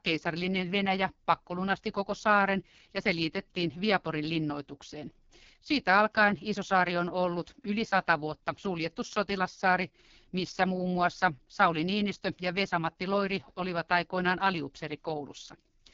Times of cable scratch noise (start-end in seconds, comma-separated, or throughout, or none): none